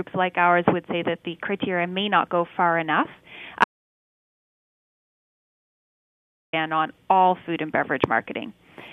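An audio dropout to silence runs from 3.64 s to 6.53 s. The sound breaks off mid-flow and leaves nearly 2.9 s of silence, with no room tone at all. This likely means the input was lost while recording continued, and everything during the gap is gone.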